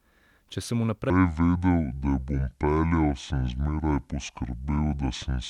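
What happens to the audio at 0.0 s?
At 0.0 s the audio is intact, with no dropout, click or distortion at that point.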